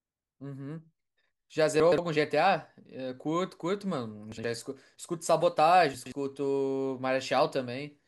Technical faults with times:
1.80-1.98 chunks out of order
4.32-4.44 chunks out of order
5.94-6.12 chunks out of order

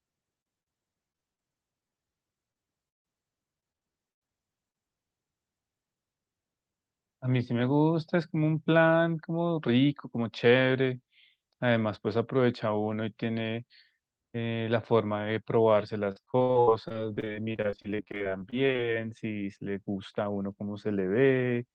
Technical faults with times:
0.41-1.40 repeated packet loss (robotic sound)
1.80-2.00 repeated packet loss (robotic sound)
2.52-2.65 short concealed packet loss
2.89-3.06 long network dropout
3.60-4.30 repeated packet loss (robotic sound)
4.70-4.76 short concealed packet loss
16.12-18.80 repeated packet loss (robotic sound)

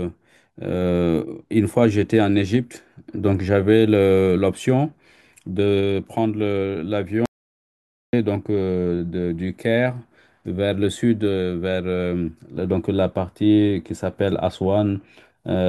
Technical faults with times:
7.26-8.13 audio dropout to silence

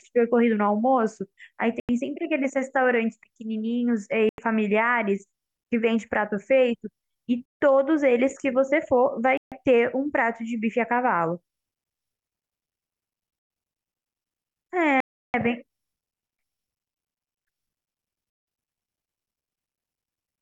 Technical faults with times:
1.80-1.89 Bluetooth stall
4.29-4.38 Bluetooth stall
7.45-7.60 Bluetooth stall
9.37-9.52 Bluetooth stall
13.39-13.50 Bluetooth stall
15.00-15.34 Bluetooth stall
18.30-18.47 Bluetooth stall

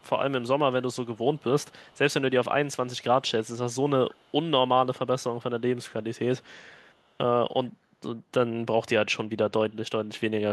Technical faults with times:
0.00-0.06 echo leak
1.14-1.98 echo leak
4.11-4.32 echo leak
6.42-6.47 echo leak
6.78-6.95 echo leak

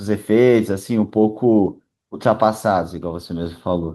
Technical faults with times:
none

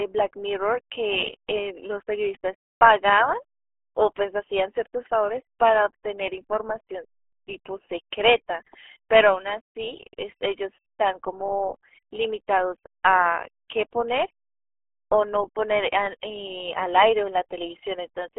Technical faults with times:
0.00-18.38 RealAudio 14.4 codec

